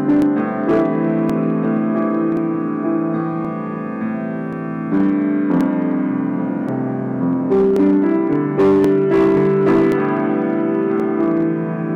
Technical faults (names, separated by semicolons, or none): hard clipping; clock drift buffer slips